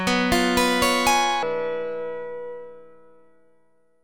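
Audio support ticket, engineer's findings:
Section at the wrong speed, 1.43 s to end of clip. Plays at 0.585x: pitch drops close to ten semitones, everything drags. Likely clock or sample-rate mismatch in player or editor. Duration stretches along with the pitch drop, unlike a pitch shifter, which holds tempo.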